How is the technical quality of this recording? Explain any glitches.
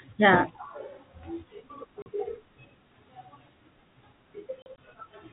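The speech has two dropouts, both packet loss filled with silence. It comes through a G.711 telephone-band path, so nothing above 4 kHz.

At 2.02 s there's a 40 ms hole. Between 4.62 and 4.78 s, 60 ms drops out in scattered bits. Missing packets play as silence, leaving hard-edged gaps.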